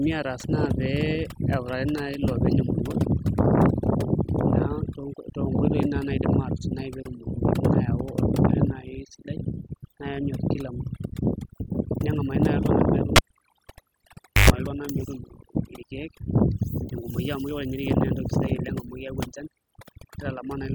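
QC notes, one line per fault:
Throughout: overdone noise removal. A noise reduction stage set far too aggressively on this speech clip pulls individual frequency bands down hard whenever they sit close to its noise estimate. Softer parts of the voice get pulled down along with the noise. Between phrases the background falls to near silence dotted with twinkling, chirpy specks. On a spectrogram the gaps show as near-black fields speckled with isolated bright dots, and the speech harmonics look ragged and holed. The waveform shows unnaturally flat, dead pauses.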